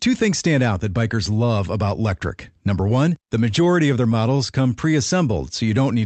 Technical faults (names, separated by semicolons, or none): scattered short gaps